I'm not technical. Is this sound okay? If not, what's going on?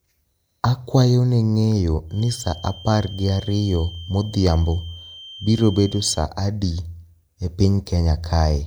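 No. Feedback whistle, 2.06 to 6.27 s: a faint, single-pitch 3.1 kHz tone behind the speech that slowly swells and fades, likely loudspeaker sound looping back into the microphone, held just short of howling.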